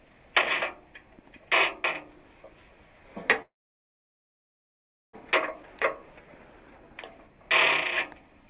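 A recording of everyday sounds, carried over a call path whose audio stops at 4 kHz, consistent with G.711 mu-law at 64 kbps, has a call audio freeze from 3.42 to 5.15 s. A brief concealment tail fades into about 1.64 s of silence, likely because the jitter buffer ran dry while packets were held up. Unlike a dropout, nothing is lost. The sound resumes exactly where it stopped, so everything afterwards arrives about 1.7 s later.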